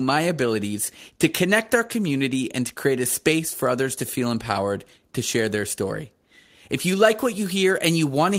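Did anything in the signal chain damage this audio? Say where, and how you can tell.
No, nothing in this speech recording stood out as damage from any stage of the signal chain when I listened to it.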